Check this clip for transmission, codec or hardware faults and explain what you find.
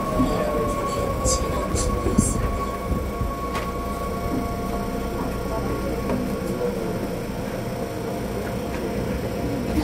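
One fault stands out: at 1.72 s there is a brief skip where the sound jumps forward, losing only a few milliseconds. The likely cause is audio missing between chunks, with the recorder handling the signal in 4-second blocks and dropping a sliver while switching from one block to the next. On a waveform, the two sides meet with no gap, often as a small step where the shapes don't line up. A spectrogram shows a thin vertical seam at that point.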